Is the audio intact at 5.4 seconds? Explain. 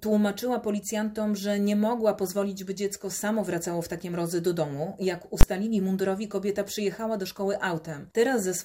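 No, there are invalid numbers at full scale from 5.41 to 5.43 s. A calculation produced infinite or invalid values that were pinned to the maximum level, holding the output flat at one extreme value, far beyond the audio's peaks, for that 20 ms block, which is short enough to be heard as a single loud bang.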